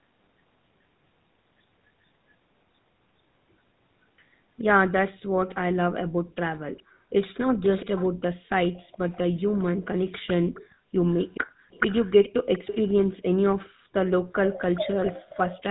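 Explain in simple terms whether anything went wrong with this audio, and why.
Throughout the recording, the voice sounds buzzy and gravelly, and everything above about 3.9 kHz is missing, so it seems muffled and boxed in. That comes from the GSM full-rate codec, the original mobile-phone speech coder. It rebuilds the voice from a simplified model of the throat and mouth driven by a coarse pulse pattern. That saves data, but the fine detail is lost and replaced with that rough, buzzy texture.

Between about 6.15 and 7.09 s, again from 10.75 to 11.7 s, and briefly at 13.71 to 13.92 s, the background sound suddenly sinks almost to silence before coming back. This is the background being gated by the echo canceller. While the loudspeaker on the far end was playing, the echo canceller turned the microphone down very hard to stop it picking up that sound, and the room noise disappeared with it.

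A ghostly second copy of the voice trails behind by about 0.42 s at 7.62 to 8.08 s, 8.63 to 9.64 s, 10.27 to 13.7 s and 14.46 to 15.63 s. Most of the time it is clearly noticeable, but during the 8.63 s stretch it is only faint. This is an echo leak. The likely cause is that one side was using a loudspeaker, and its echo canceller didn't fully remove the sound the microphone picked up, so part of it was sent back down the line.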